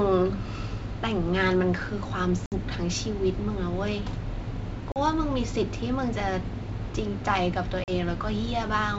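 Hard-edged silent gaps cut the speech at 2.46–2.53 s, 4.92–4.97 s and 7.84–7.90 s, each followed by a slightly distorted return. This is packet loss on an ADPCM call: the dropouts leave the decoder's predictor and step size mismatched until they resynchronise.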